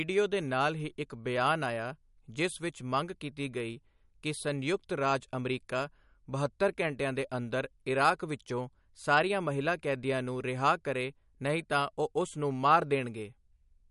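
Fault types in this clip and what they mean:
MP3 compression: the speech has a watery, swirling quality throughout, and nothing survives above about 11.2 kHz, which likely points to a low-bitrate MP3 around 48 kbps. On a spectrogram the treble stops at a flat ceiling, with weak bins flickering on and off between frames.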